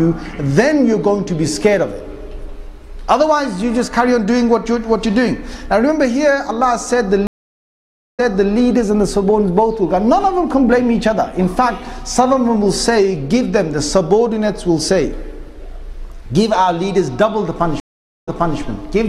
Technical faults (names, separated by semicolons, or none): stream reconnect